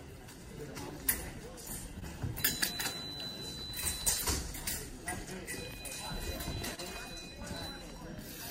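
Two brief smears, where the sound wobbles and blurs for a moment rather than cutting out, mark short concealed packet loss at 1.99 to 2.03 s and again at 6.75 to 6.80 s. Each time about 20 ms of audio failed to reach the decoder in time, and the receiver covered the gap by extending what it had just played before blending back into the real signal, so any very short sound in that window is softened or lost. Near the end, from 7.32 s to 8.32 s, a few small, evenly spaced ticks appear about every 0.5 s, which is the signature of periodic USB or driver dropouts. A recurring background task stalls the audio path at a fixed interval, and each stall drops roughly a millisecond of audio outright, so the waveform jumps forward and clicks rather than falling silent.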